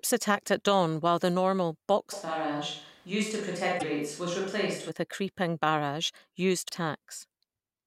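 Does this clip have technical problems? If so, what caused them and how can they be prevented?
Yes. From 2.14 to 4.88 s, after "dawn while the normal" until "a creeping barrage", the sound turns roomy and hollow with thinner bass at about the same level, and room noise sits roughly 30 dB below the speech. This is likely a switch to a distant microphone, such as a camera mic, after the close microphone's signal dropped out. Prevention: monitor and record the close mic on a separate backup track.

Brief glitches at 3.75 to 3.83 s and 6.65 to 6.70 s, the second just after "a creeping barrage", come from damaged data in a compressed stream: corrupted frames make the decoder lose sync and jump ahead. Prevention: use checksummed transfers and error-protected storage or streaming.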